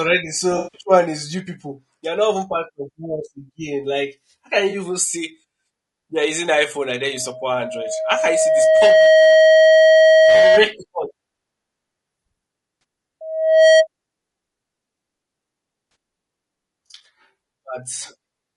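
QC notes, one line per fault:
Throughout: low-delay AAC compression. The speech sounds rough and grainy, with noise between harmonics and a thin top band. The codec is likely AAC-ELD at a rate that fits about 32 kbps; its short frames resolve pitch poorly.
0.57–0.83 s, 4.69–4.75 s, 12.81–12.83 s, 15.91–15.95 s: AAC frame loss with concealment. The decoder refills lost audio from the last good spectrum. The first gap, 160 ms just before "one is you people", sounds smeared and noisy. The gap after "how can" and the one at 15.91 s each last 40 ms. The one at 12.81 s lasts 20 ms and sounds like a brief phasey blur.
7.13–10.63 s, 13.21–13.87 s: loudspeaker feedback squeal. A 636 Hz tone swells to about 10 dB above the speech. The first squeal follows "and then" and builds over roughly two seconds. The second builds in about half a second. The microphone-to-speaker loop gain exceeds one at that frequency.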